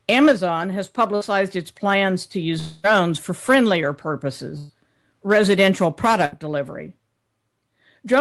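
At 1.15 to 1.24 s, just before "its plans to", a burst of packet loss drops about 60 ms of speech. The receiver stretches and fades the last sound to cover it, and the speech resumes slightly further on. The same short, smeared patch recurs at 4.58 to 4.72 s (about 120 ms missing) and at 6.25 to 6.34 s (about 60 ms).

From 2.59 to 2.87 s, between "its plans to" and "for friendlier", the gap is far longer. About 240 ms is missing, likely a long network dropout. The fill is a quarter-second fading buzz or hiss that never falls to silence, much longer than the brief packet-loss patches.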